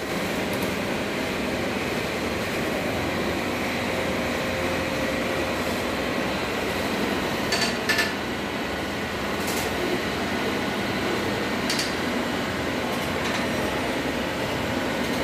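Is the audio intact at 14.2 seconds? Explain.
No. Channel delay (doubling) runs through the whole clip, so it is present at 14.2 seconds too. One channel arrives about 92.9 ms late, which fits a 4096-sample buffer, and the two channels are then summed to mono. Because that lag is far too long to blur into a comb-filter colouring, the late copy stands apart as a distinct doubling, a slap echo at the same level trailing every sound.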